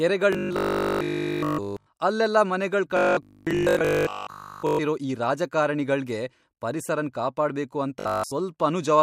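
A rigid, metallic buzz fixed at 50 Hz runs through the speech from 0.33 to 1.89 s, and for most of 2.97 to 4.81 s and 8.00 to 8.36 s. This is robotic sound from repeated short buffers, likely a 20 ms chunk replayed while fresh audio arrived too seldom.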